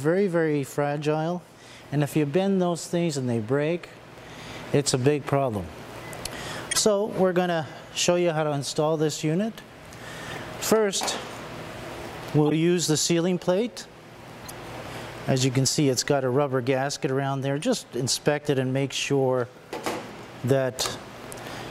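Damaged compressed frames were decoded and played without being concealed, a corrupt frame decoded fault that repeats five times in this audio. Flipped bits led the decoder to misread gains and codes, putting energy at the wrong frequencies for a few frames each time. These are heard as short chirps and noise bursts at 6.71–6.79 s (loudest, around -5 dBFS), 10.28–10.38 s, 12.47–12.52 s, 14.42–14.51 s, and 17.62–17.65 s (faintest).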